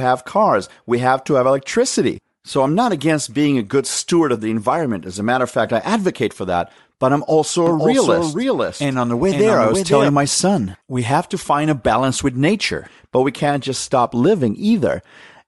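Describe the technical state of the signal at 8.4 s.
At 8.4 s the speech carries a doubled audio track, running from 7.67 s, just after "that but I'm also", to 10.09 s, just before "my son we have". A second full-band copy trails about half a second behind at about 5 dB lower. It is likely an edit or slower capture path holding two out-of-step copies. Unlike an echo or reverb, it has no decay or room colouring and starts and stops abruptly.

Underneath, as throughout, is plainly audible Bluetooth LC3 compression. The codec likely empties much of the upper spectrum and refills it with noise, consistent with roughly 48 kbps and short 7.5 ms frames. That gives the voice a grainy, breathy edge rather than the clean dull top of a simple bandwidth limit.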